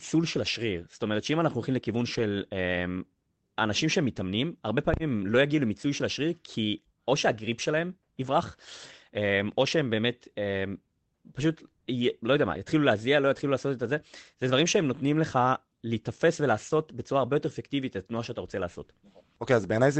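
At 2.13 to 2.23 s, and again at 5.29 to 5.31 s, the speech turns briefly rough and noisy. Each is a lost packet rebuilt from error correction. Low-bitrate copies carried in the following packets filled about 60 ms, then 20 ms. No gap is heard.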